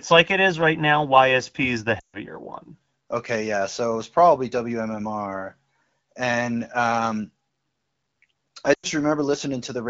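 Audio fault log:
1.99–2.16 s, lost AMR speech frames: the speech quickly drops to near silence, then returns briefly weak and rough. About 140 ms failed, which fits seven 20 ms frames. The wideband decoder repeated the last good pitch and vocal-tract settings while cutting gain, so the sound fades fast.
8.73–8.87 s, lost AMR speech frames: a similar shorter dip of about 100 ms, consistent with five frames, before the lightly coded HD Voice signal recovers.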